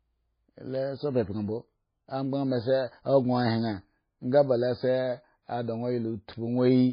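A speech recording with two faults. Throughout, the sound is watery and swirly, with nothing above 5 kHz. This is likely heavy MP3 compression, which fits a bitrate near 17 kbps. From 0.29 s to 6.80 s, word clock ticks recur roughly every half second, about fifteen in all. They come from a receiving clock running about 50 parts per million off the sender's, dropping or repeating one sample each time the clocks slip.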